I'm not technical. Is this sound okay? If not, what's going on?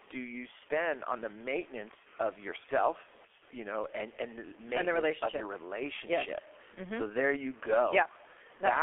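No. Low bit depth without dither runs through the whole recording: quiet parts sound gritty and grainy, likely from saving the sound with too few loudness steps.

The G.723.1 codec, an old internet-phone format, also affects the entire clip. It keeps only a narrow middle band, roughly 250 Hz to 3.4 kHz, so the speech sounds muffled and hoarse, with smeared consonants.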